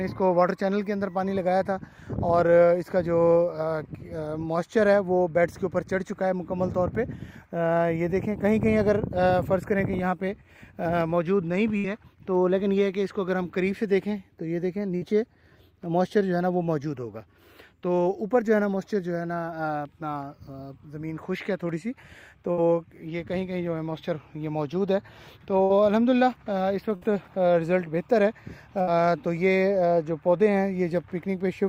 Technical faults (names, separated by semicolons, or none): dropped buffer (overrun); burst of packet loss